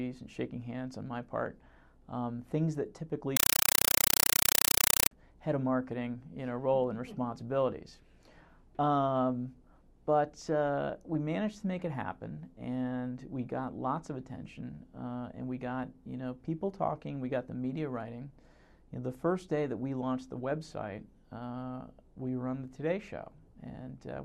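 From 3.37 s to 5.11 s the audio is replaced by chattering static: short bursts of noise, each about 5.33 ms long, separated by gaps, repeating 31.25 times a second. This is a compressed stream played as audio. An AC-3 (Dolby Digital) bitstream reached the output undecoded and was treated as ordinary samples. Each coded frame plays as a noise burst followed by its padding, and the burst pattern fits a stream of about 256 kbps.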